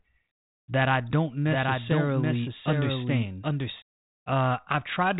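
From 1.46 to 3.82 s the speech gains a doubled audio track: a second full-band copy trails the original by about 0.7 s, around 5 dB quieter, with no room colour, and cuts in and out abruptly. This is likely a second capture path or misaligned edit, heard within the G.726 telephone band that stops near 3.9 kHz.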